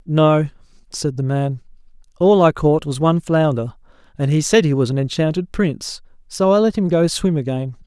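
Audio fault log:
No audible faults were found in this speech recording.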